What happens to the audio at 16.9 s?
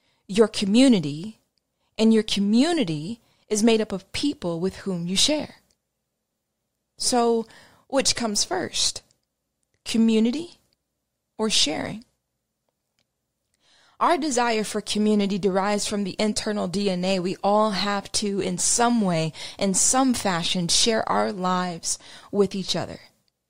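Nothing goes wrong at 16.9 s: the speech carries on without a dropout, click, glitch or other disturbance at that point.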